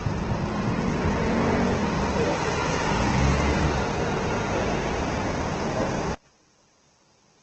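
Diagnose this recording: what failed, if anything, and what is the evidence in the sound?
Codec stage: throughout, the sound is grainy and rough with nothing above 8.3 kHz, not swirly, which points to heavy Opus compression at a low bitrate, likely around 12 kbps.

Analogue wiring or playback: from 6.15 s to the end, the level falls by about 35 dB, leaving a faint residue rather than silence. This is likely one channel inverted, cancelling in mono.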